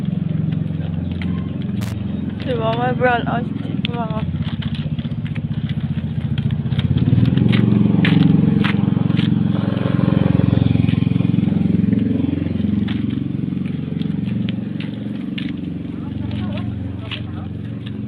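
A brief, irregular burst of crackle from 1.81 to 1.93 s is loose connector crackle: a worn contact making and breaking, chopping the signal.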